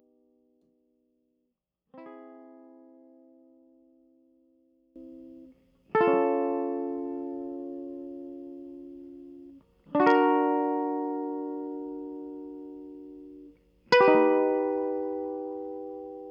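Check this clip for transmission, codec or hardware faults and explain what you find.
One fault affects the opening of this music. From 0.0 to 4.96 s the level drops by about 23 dB and the sound turns faint, with the centre nearly gone. The likely cause is one channel inverted: reversed polarity cancels shared content in the mono sum.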